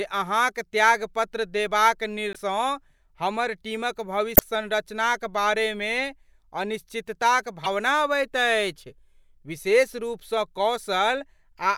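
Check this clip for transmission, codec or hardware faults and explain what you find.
Three bursts of damaged data in a compressed stream break into the speech: at 2.32 to 2.36 s, just after "अहाँक त्यागपत्र देबाक"; at 4.33 to 4.41 s; and at 7.63 to 7.67 s, just before "अबैत अछि". Corrupted bytes make the decoder misread those frames and lose sync until it finds the next frame header, so each spot becomes a brief garbled chirp or blip.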